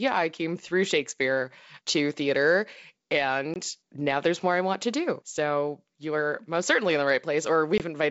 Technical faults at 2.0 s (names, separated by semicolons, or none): none